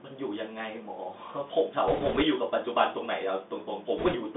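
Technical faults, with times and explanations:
Throughout: Bluetooth CVSD headset codec. The audio is confined to roughly 200 Hz to 3.6 kHz, a band that fits a 64 kbps one-bit delta coder whose adaptive step lags sharp high peaks, so sibilants turn scratchy over grainy hiss. A spectrogram shows nothing above 3.6 kHz.
1.88–2.23 s and 3.98–4.15 s: bit errors on a Bluetooth voice link. A few percent of bits flip. Each carries only one small step and the error fades quickly, so there are no loud clicks, just a rushing crackle. The spectrogram shows in-band broadband speckle, and the waveform has no spikes.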